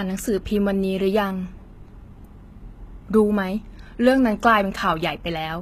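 The speech has plainly audible codec damage throughout: the treble is synthetic, not matching the lower spectrum, and nothing extends above 14.9 kHz. This is likely HE-AAC compression, rebuilding the top from copied lower bands, at a bitrate around 20 kbps.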